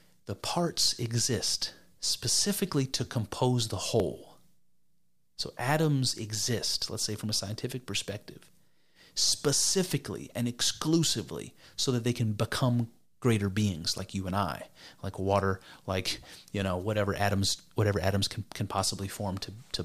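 At 4.00 s a few milliseconds of speech vanish, likely audio missing between 5-second chunks, leaving a sudden waveform step and a thin vertical spectrogram line.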